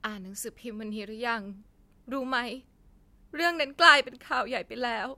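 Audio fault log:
No faults heard anywhere in this speech clip.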